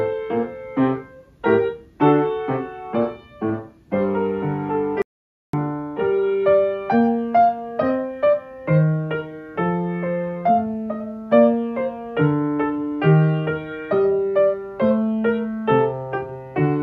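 At 5.02 s the audio just drops out to silence, and it doesn't come back until 5.53 s, so roughly half a second, about 515 ms, is simply gone. The gap is dead digital silence with no room tone underneath, and the sound cuts off and resumes mid-flow. That's a classic audio dropout to silence, most likely the input briefly disappearing, from a loose connection, a failed link or an accidental mute, while the recorder kept writing silence.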